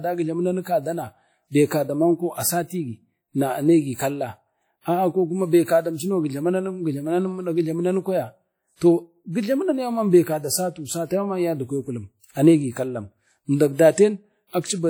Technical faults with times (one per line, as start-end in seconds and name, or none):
0.00-14.89 WMA compression